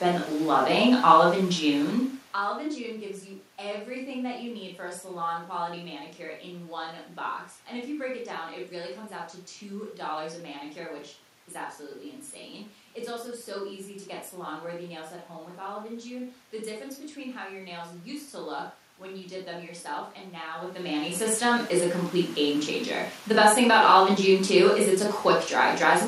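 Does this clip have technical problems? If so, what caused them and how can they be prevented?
No, no technical faults here.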